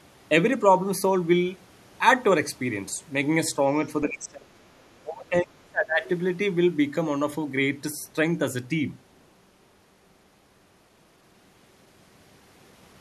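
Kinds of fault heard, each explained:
Speech suppressed in double talk: speech drops about 25 to 30 dB in two stretches, likely an echo canceller muting during overlapping talk.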